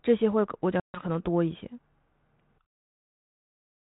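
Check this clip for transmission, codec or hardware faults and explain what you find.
One fault is present: packet loss on an ADPCM call, between 0.80 and 1.03 s. About 140 ms of speech is gone, which points to roughly seven lost packets. Silence fills the gap, and its edges are abrupt. The 32 kbit/s G.726 link carries the speech around the gap with only light coding damage. During the silence the receiver's adaptive predictor and step size fall out of step with the sender's. Speech therefore resumes with brief, slight distortion, and it settles within some tens of milliseconds. A simple dropout would come back clean, so this recovery transient marks the fault as ADPCM loss.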